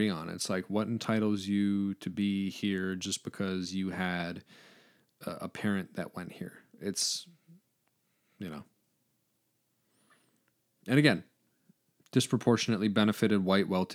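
No technical faults can be heard anywhere in this speech recording. There is no moment in it that calls for comment.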